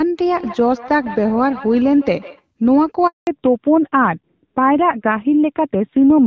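At 3.07 s the speech cuts out abruptly in a handover gap: the call was passed from one network to another, and for about 200 ms, until 3.27 s, no speech frames reached the receiver. The voice decays within a few tens of milliseconds and leaves a clean hole of silence, so whatever was said in that window is missing rather than garbled.

From 3.27 s to the end the call shows a fallback to narrowband. When the new link comes up, the wideband HD Voice stream that carried the first part of the clip, where the audio has the clarity of AMR-WB at around 12.65 kbit/s, is replaced by an older narrowband codec. Nothing above 4 kHz survives, so sibilants and consonant detail lose their edge. The voice turns dull and rougher, which fits AMR-NB running at about 7.4 kbit/s.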